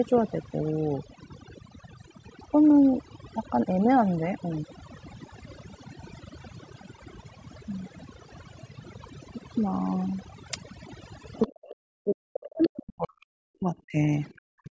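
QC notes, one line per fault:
Throughout: overdone noise removal. The background drops away and breaks up into twinkling specks, and quiet parts of the speech go missing along with the noise. Unlike a double-talk dip, this damage is constant and never tracks a second voice.
11.47–13.21 s, 13.45–14.01 s, 14.39–14.71 s: speech suppressed in double talk. The talker's speech sinks by as much as roughly 40 dB, most likely because an echo canceller pulled everything down while both sides spoke. Unlike the steady noise-removal thinning, these are sudden, deep, localized dropouts.
12.62–12.69 s: other side's voice leaking through. A brief scrap of a second voice surfaces some 15 dB below the talker, likely left behind when the loudspeaker echo escaped cancellation. It is an added foreign sound rather than missing talker speech, which separates it from the suppression around it.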